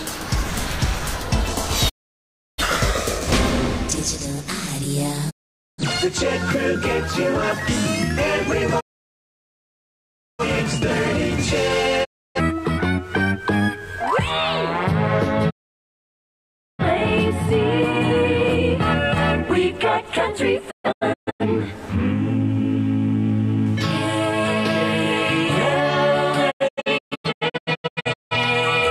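The audio is broken by a digital broadcast dropout that strikes seven times. The sound mutes at 1.88–2.64, 5.29–5.83, 8.79–10.43, 12.03–12.41 and 15.49–16.84 s. At 20.70–21.45 and 26.50–28.36 s it breaks into several short holes instead. The receiver is discarding corrupt frames and fading out over 20 ms each time. On a waveform or spectrogram these appear as blank gaps with steep edges, lasting 0.3 to 1.6 s, or as a ragged row of thin slots.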